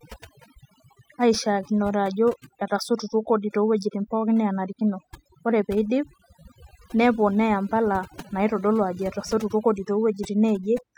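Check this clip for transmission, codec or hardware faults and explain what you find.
The clip has one fault, overdone noise removal, present throughout. A noise reduction stage set too aggressively is pulling individual frequency bands down whenever they sit near its noise estimate, taking quieter speech components along. The background drops and breaks up into twinkling specks.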